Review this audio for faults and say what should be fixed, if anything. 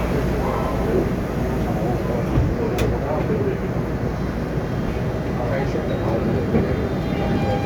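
No faults; nothing needs fixing.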